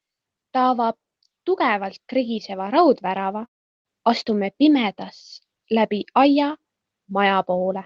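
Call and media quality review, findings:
Speech drops at 3.45 to 3.87 s: the last sound smears into a fading buzz, goes near-silent, then comes back with about 0.4 s gone. Likely a long network dropout, with the receiver concealing then giving up. The high end tops out near 8 kHz, which fits Opus at roughly 20 kbps.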